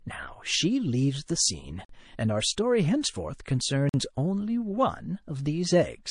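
A speech recording carries audible codec damage throughout, most likely MP3 compression at a low rate, with artefacts consistent with roughly 40 kbps. The upper spectrum has a watery, swirling texture as weak frequency components drop in and out from frame to frame. Sibilants take on a metallic chirp and consonant onsets are smeared, because the encoder cannot afford to code the quieter detail and discards it. There are also two gaps between chunks, at 1.85 to 1.89 s and at 3.89 to 3.94 s. Each is a silence of about 46 ms, and they fall 2 s apart, which points to the audio being delivered in 2-second chunks with silence inserted at each join, typically from codec padding or late chunk playback. Nothing is lost, but the flow breaks with a hole at both points. Pre-echo precedes a sharp attack at 5.44 s. A hiss, about 12 dB above the surrounding floor, spreads over roughly 21 ms before the onset, and the attack itself sounds softened. 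The encoder appears to be holding a long transform window of about 52 ms rather than switching to short blocks, so quantisation noise sized for the loud onset leaks into the quiet moment ahead of it.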